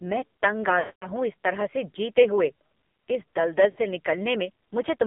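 The whole speech clip runs through an AMR narrowband mobile codec. Nothing sits below about 200 Hz or above 3.6 kHz. Heavy coding damage makes the voice buzzy and synthetic. That thin, rough sound fits the low 5.9 kbps mode.

Lost AMR speech frames appear from 0.80 to 1.08 s, after "मैं तंग आ". The decoder repeats old settings with falling gain. The sound smears, then fades out. The 220 ms gap points to eleven frames. Speech resumes weakly at "हूँ इस तरह से".

From 3.70 to 3.81 s, after "जीते हुए इस दलदल", a shorter run of lost frames gives a brief warbling dip. It fits three lost frames.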